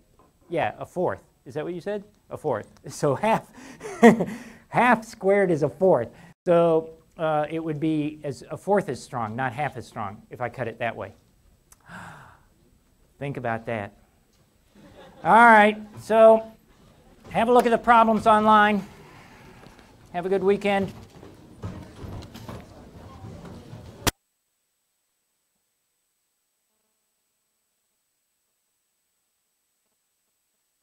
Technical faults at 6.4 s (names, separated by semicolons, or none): playback stall